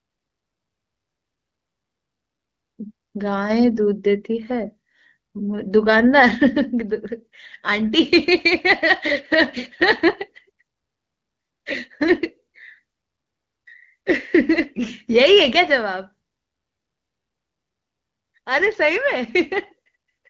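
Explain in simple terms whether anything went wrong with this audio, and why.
Nothing went wrong with this speech recording, which passes through an HD Voice (AMR wideband) phone codec working as intended at one of its clearer settings.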